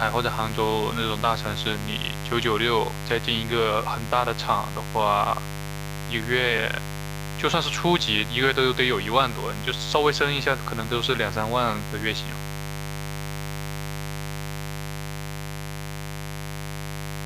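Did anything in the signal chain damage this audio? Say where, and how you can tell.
Yes. In the analogue wiring, switching spikes from the 50 Hz mains, twice per cycle, leak in, laying a raspy mains buzz under the whole speech clip, only about 10 dB down.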